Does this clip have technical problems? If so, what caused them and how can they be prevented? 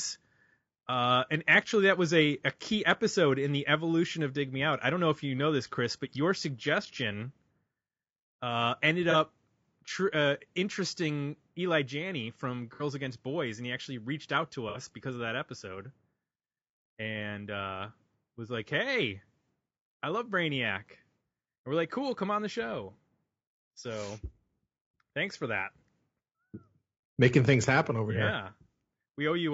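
Yes. Throughout, the speech sounds rough and grainy with a dulled top band, likely low-delay AAC compression (AAC-ELD) at a low rate, which fits about 32 kbps. Unlike packet loss, this grain is constant rather than patchy. A higher bitrate prevents it.

AAC frame loss with concealment appears at 9.11–9.16 s, 12.74–12.83 s and 14.69–14.77 s: brief smeared, noisy patches where the decoder extrapolated missing audio. The gaps fit one or two lost frames each, with no dropout to silence. A more reliable network link or forward error correction prevents it.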